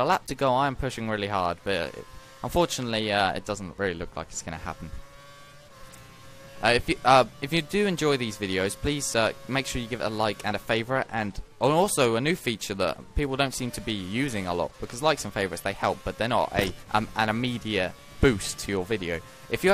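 No dropouts, clicks, distortion or level jumps turn up anywhere in the clip, so there's nothing to flag.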